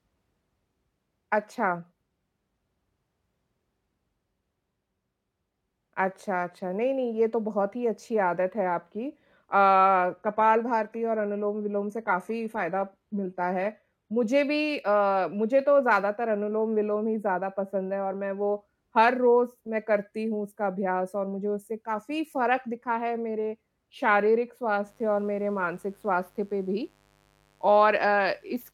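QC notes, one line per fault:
10.19–14.19 s, adaptive stream at a lower bitrate: the speech turns abruptly duller and more coarsely coded, with nothing above 14.9 kHz, then snaps back just as suddenly. There is no dropout at either boundary. The player switched to a cheaper rendition while the connection slowed. The sound points to a step down from a 96 kbit/s AAC stream to a low-rate HE-AAC one of around 20 kbit/s, which discards the top of the spectrum.
24.83–28.73 s, mains buzz: a steady, raspy buzz sits under the speech to the end, faint at around 40 dB below it. It is built on 50 Hz, with a dense ladder of harmonics climbing into the kilohertz range. That harsh, spiky character comes from switching pulses, from something like a dimmer, rectifier or poorly shielded cable, leaking in twice per mains cycle.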